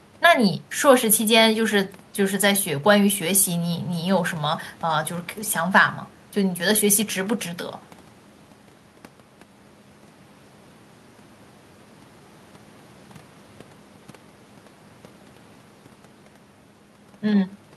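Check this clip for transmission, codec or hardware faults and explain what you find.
Nothing to flag here: the speech holds together the whole way with no transmission, codec or hardware fault worth reporting.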